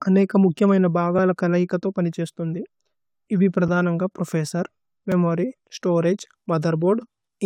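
At 5.12 s, a block of digital silence about 2.7 ms long, consistent with a 128-sample buffer left unfilled, cuts the speech out abruptly. It sounds like a tick rather than a fade or an audible gap.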